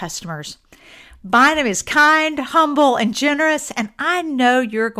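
No audible technical faults.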